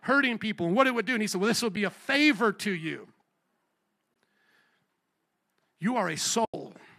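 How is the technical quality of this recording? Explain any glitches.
The speech has three short dropouts, where bits of the signal simply go missing.

They're AAC frame loss with muting, at 1.76 s, 4.14 s, and 6.45 to 6.54 s. The decoder lost frames and zeroed their spectrum, while the overlapping windows faded the sound down and back up. The gaps run about 10 ms, 20 ms and 90 ms, consistent with the roughly 10 ms frames of the likely low-delay AAC (AAC-ELD) coding. You hear a brief dip at the first and soft-edged holes at the others, and the last one is the longest.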